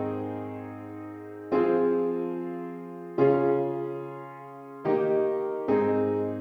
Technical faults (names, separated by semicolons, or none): none